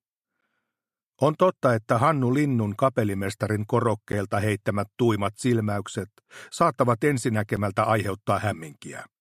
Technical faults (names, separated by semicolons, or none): block of digital silence